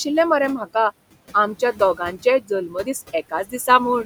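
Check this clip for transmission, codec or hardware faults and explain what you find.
Two faults are present, both from noise suppression acting on speech recorded over room noise sitting about 16 dB below the voice.

Noise suppressor artifacts run throughout. The suppressor pulls steady-noise bands down by about 20 dB frame by frame, so the background sinks in gaps and swells under speech.

Speech cut by the noise suppressor occurs at 1.6–1.81 s, 2.17–2.51 s, 2.68–2.87 s and 3.3–3.68 s. The suppressor mistook quiet speech for noise, dropping it by about 11, 15, 10 and 16 dB, so roughly a tenth of a second in each stretch sounds swallowed.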